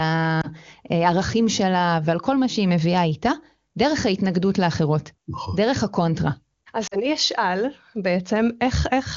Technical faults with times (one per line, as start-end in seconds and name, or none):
0.41-0.48 lost AMR speech frames
6.87-6.96 lost AMR speech frames